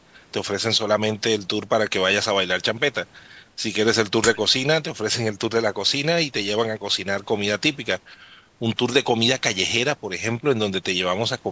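No technical faults are audible.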